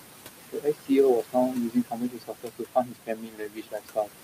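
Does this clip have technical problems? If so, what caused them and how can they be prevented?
Yes. Throughout, the background sinks and swells; these noise suppressor artifacts come from frame-by-frame cuts of about 21 dB on bands judged as noise, here acting on room noise only about 9 dB below the speech. Less aggressive suppression, or reducing the room noise at the microphone, would prevent this.

From 0.52 to 0.91 s and again from 1.15 to 4.13 s, parts of the speech turn faint and swallowed, about 400 ms in the first stretch and roughly two seconds in the second. This is speech cut by the noise suppressor, which mistook quiet speech for noise and lowered it by about 21 to 22 dB. A gentler suppression setting or better speech detection would keep these parts intact.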